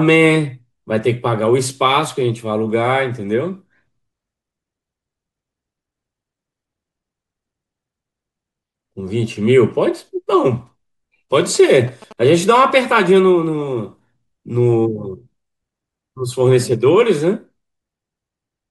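At 11.40 s the speech picks up GSM signalling bursts that run until 13.07 s: that galloping dit-dit-dit of short buzzes pulsing at about 217 Hz. A 2G phone close by is handshaking with the network, and the audio circuitry rectifies its radio bursts into the signal path. It sits roughly 20 dB under the speech, so it's quieter than the voice.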